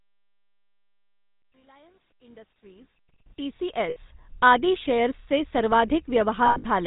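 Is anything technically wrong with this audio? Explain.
Yes. Throughout, the speech has a buzzy, gravelly roughness with nothing above 4 kHz: the GSM full-rate codec, which fits its 13 kbps pulse-excited vocal-tract model, is plainly audible.

At 1.40 to 1.44 s, 3.90 to 3.97 s, and 6.46 to 6.66 s, the sound holds as a rough metallic ring. These are lost GSM frames, each concealed by repeating the last good frame. The last gap spans about 200 ms with its longest run near a tenth of a second.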